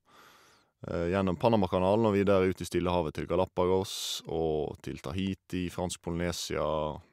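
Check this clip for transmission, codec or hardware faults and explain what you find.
Nothing wrong turns up anywhere in this speech recording.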